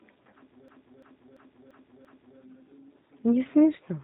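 From the start and throughout, the speech carries the plainly audible signature of the G.729 codec. The band stops at about 3.8 kHz, leaving a dull, telephone-narrow sound, and the voice has a slightly rough, synthetic edge because each 10 ms frame is resynthesized from a vocal-tract filter, a pitch predictor and a few pulses rather than the waveform itself. The character fits the low-rate G.729A variant at around 8 kbit/s.

From 0.68 s to 2.39 s a system hang loop takes over. The host or driver stalled while the audio hardware kept replaying the same ring buffer, so one 341 ms piece of audio repeats exactly five times. At 2.93 Hz the result is a mechanical stutter rather than a buzz, and the length points to a 16384-sample buffer. Once playback resumes, the sound picks up where it left off, with essentially nothing dropped.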